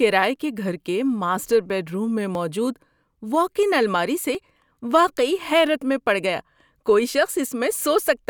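Regular ticks land every 2.0 s from 0.36 to 4.35 s, just before "واقعی حیرت میں پڑ": periodic USB or driver dropouts, each skipping about a millisecond of speech.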